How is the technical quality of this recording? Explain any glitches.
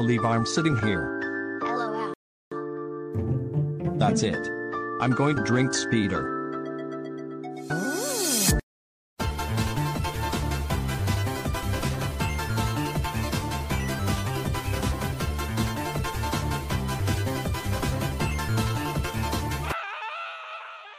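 There's one glitch, a rebuffering stall from 2.14 to 2.52 s. The player ran dry of downloaded audio and waited for more, so the sound drops to silence for about 0.38 s, then picks up exactly where it left off. Nothing's missing, just time added.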